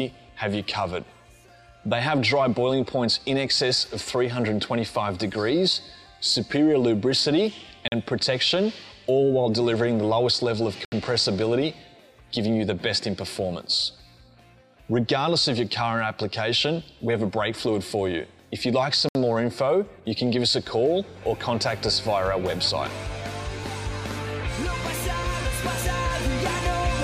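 Samples were replaced by zeros, leaving a block of digital silence at 7.88 s (40 ms), 10.85 s (71 ms) and 19.09 s (64 ms), each a short hole.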